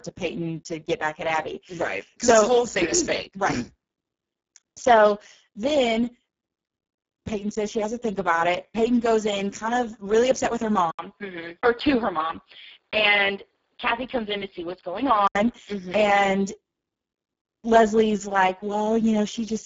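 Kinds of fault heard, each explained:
Speex codec: This is the old CELP speech codec from VoIP and game chat, and here it's been run hard. With so few bits for the excitation, the speech comes out hoarse, noisy and a bit robotic all the way through, which fits a very low setting around 5.8 kbps. There's nothing above about 7.7 kHz, and the top band that is there sounds like shaped hiss rather than real detail.
Input switched to a poorer device: From about 10.91 s to 15.36 s the sound abruptly goes duller and narrower, with nothing left above 5 kHz, and there's a short gap of about 80 ms right at the change. The likely cause is the input jumping to a lesser microphone or a headset call profile. The loudness stays about the same, and the new device brings a faint background noise sitting well below the speech.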